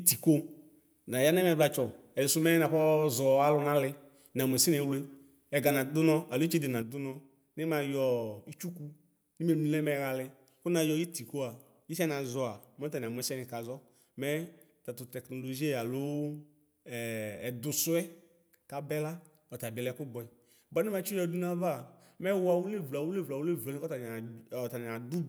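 A stereo channel has likely dropped out from 6.82 s, just after "nadʋ nɔ alo itsede", and stays lost through the end. In the mono sum, the speech shared by both channels falls abruptly by about 6 dB and is otherwise unchanged.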